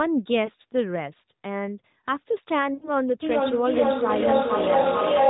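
Speech over a narrowband mobile call, with nothing above 4 kHz and light AMR codec buzz. Lost AMR speech frames cause a brief warble at 0.46 to 0.50 s and another at 4.82 to 4.87 s. Each fits one missing 20 ms frame. At 2.74 to 2.91 s the sound drags and fades, which fits about four frames in a row. The decoder stretched the last good frame with falling gain. From 3.22 s to the end there is feedback echo between two devices. One device replays the other's microphone, so the sound returns about every 0.4 s. The repeats reach about 4 dB above the speech and pile up instead of dying away.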